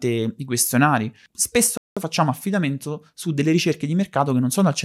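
At 1.77 s the speech cuts to silence mid-flow for about 190 ms, resuming at 1.97 s with "facciamo affidamento su delle". This is a playback stall, most likely the player running out of buffered data or having its thread blocked until output recovered.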